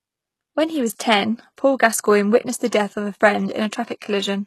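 Throughout, the speech likely went through low-bitrate HE-AAC compression. Its copied-up treble makes s sounds gritty and lispy, and nothing is present above 12.3 kHz.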